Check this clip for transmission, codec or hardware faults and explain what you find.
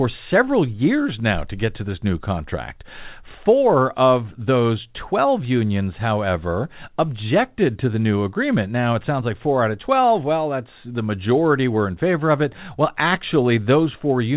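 No transmission, codec or hardware faults are present in the speech, which is band-limited at 4 kHz as expected for A-law telephone coding at 8 kHz.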